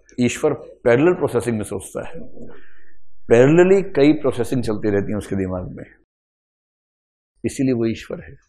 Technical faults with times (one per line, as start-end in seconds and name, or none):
2.05-5.15 DC step